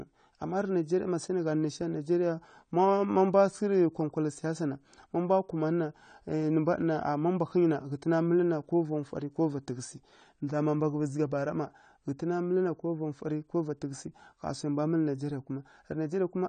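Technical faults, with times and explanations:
Throughout, AAC compression: likely a low-bitrate AAC-LC encode, fitting about 32 kbps, cuts everything above 9 kHz and quantises the rest, leaving speech plainly dull and smeared.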